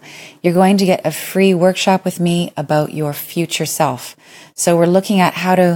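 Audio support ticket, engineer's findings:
No faults found on listening; the speech track gives no audible symptom to trace to any component.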